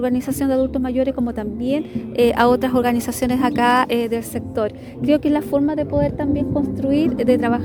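No technical faults can be heard anywhere in the audio, and the signal stays steady and intact throughout.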